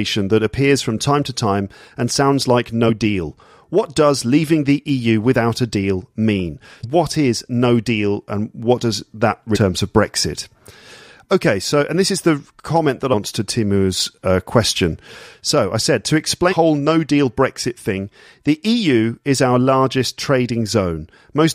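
Damaged data in a compressed stream produces five brief blips in this speech: 2.88 to 2.90 s, 6.83 s between "without a deal mean" and "is no deal and", 9.55 to 9.57 s, 13.12 to 13.14 s after "is the comment that", and 16.51 to 16.54 s between "I said to" and "no deal". At each, corrupted bytes made the decoder misread a frame and hunt for the next header, giving a short chirp or squawk. On a spectrogram each shows as a narrow vertical smear of broadband or oddly tonal energy. The waveform has a small discontinuity.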